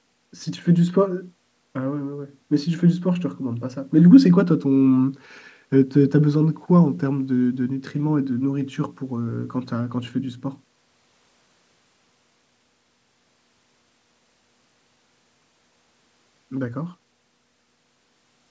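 Nothing goes wrong anywhere in this speech; the only thing to hear is the usual call microphone processing, which trims off the very lowest bass and leaves nothing above 8 kHz, and that's just how it's meant to work.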